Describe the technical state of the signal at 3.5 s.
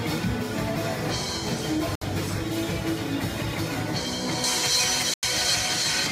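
Nothing at 3.5 s shows any fault: the signal is intact at that point.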